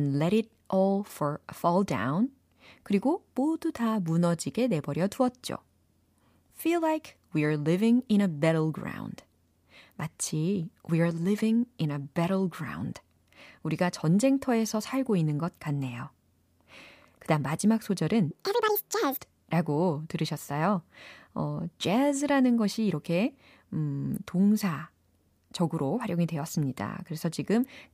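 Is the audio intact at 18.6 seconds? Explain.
No. From 18.31 to 19.19 s the speech plays as a section at the wrong speed, running at 1.82 times its recorded rate. The span starts right after "그 다음 마지막" and ends just before "라고 들으셨어요 어 jazz라는". Because speed and pitch move together, the voice jumps up by roughly ten semitones and sounds chipmunk-like and rushed for under a second. The likely cause is that this stretch was played back or resampled against the wrong clock.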